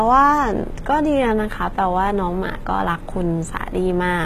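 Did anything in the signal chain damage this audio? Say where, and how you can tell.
Yes, at the codec stage, and it runs through the whole speech clip. The upper band sounds synthetic: sibilants come out gritty and lispy, with a metallic sheen that does not track the harmonics below it, and nothing survives above 14.8 kHz. This is likely HE-AAC compression. The encoder keeps only the lower spectrum and rebuilds the treble by transposing lower bands upward under a coarse envelope. The damage is plainly audible, which fits a bitrate around 20 kbps.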